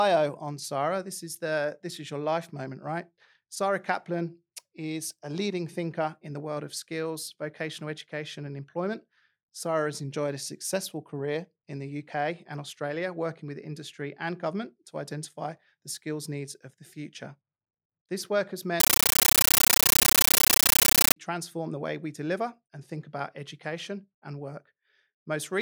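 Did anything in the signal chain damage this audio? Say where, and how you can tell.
Yes. Right after "work has", from 18.80 to 21.16 s, the speech drops out and you get loud, chattering static until "the way we deliver" comes back. That's a compressed stream played as audio at the playback end. A Dolby Digital bitstream went down the digital link undecoded and got treated as PCM. The chatter repeats 31.25 times a second, with bursts about 13.3 ms long separated by silent padding, which fits a 640 kbps AC-3 stream.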